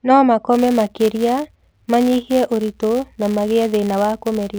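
A speech recording carries a steady buzzing tick from about 0.52 s through to the end at 4.59 s. It sits at roughly 172 Hz and rises and falls with the loudness of the talking. This is a filter restarted on every block. The filter drops its memory at each block boundary and starts again from silence, so each block opens with a tiny transient. A repetition rate of 172 Hz fits a 256-sample block.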